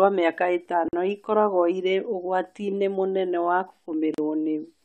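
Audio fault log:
0.88–0.93 s and 4.14–4.18 s: gap at a join of encoded pieces. The speech drops out for about 47 ms just before "ikoragwo irĩ" and about 38 ms right after "mũnene wa," then resumes where it stopped. Separately encoded segments were joined with the encoder's start delay and last-frame padding left in. The waveform shows flat near-silent strips with smeared edges. The spectrogram shows thin vertical blank bands cutting across all frequencies.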